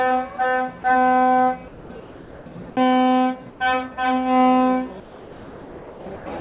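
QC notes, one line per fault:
1.68–1.90 s, 2.00–2.46 s, 3.50–3.60 s, 5.00–6.06 s, comfort noise in place of the background: the quiet background, about 19 to 23 dB below the loud parts, becomes a smooth, detail-free hiss about 2 to 5 dB quieter. The likely cause is discontinuous transmission, with the receiver synthesising noise.
6.16–6.26 s, sound dropped by the voice detector: about 70 ms of real sound vanishes under the same flat noise for 0.1 s before the audio resumes, likely because the detector mistook it for background. Nothing above 4 kHz is heard, which fits a 64 kbps G.711 call codec.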